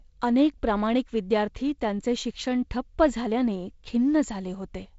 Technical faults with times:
none

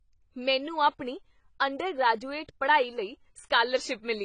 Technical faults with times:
0.00-4.25 AAC compression

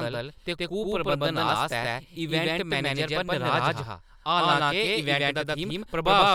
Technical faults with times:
0.00-6.34 doubled audio track

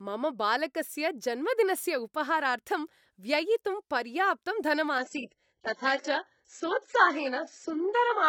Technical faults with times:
4.98-8.28 adaptive stream at a lower bitrate

